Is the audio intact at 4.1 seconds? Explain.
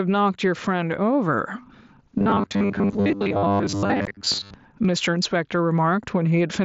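No. From 2.19 to 4.54 s there is robotic sound from repeated short buffers, likely caused by audio arriving too seldom so that roughly 70% of it is replaced by repeats of a 10 ms chunk. This forces a rigid 100 Hz metallic buzz, a fixed pitch rather than gaps.

Just before, at 4.05 s, unconcealed Bluetooth headset packet loss leaves a 15 ms hole, consistent with two dropped frames. It sounds like an abrupt silence, not a repetition.

Throughout, there is gain pumping: the level swings by about 15 dB, likely as loud sounds pull the gain down. This is a smooth level movement rather than holes.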